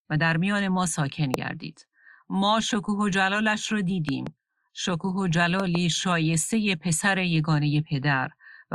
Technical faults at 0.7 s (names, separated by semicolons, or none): none